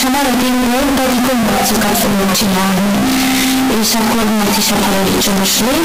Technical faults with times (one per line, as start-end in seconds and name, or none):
0.00-5.85 float read as integer